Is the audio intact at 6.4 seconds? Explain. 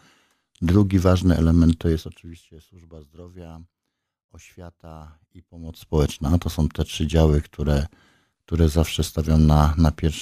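Yes, the audio is intact at 6.4 seconds, with no dropout, distortion or other fault at that moment.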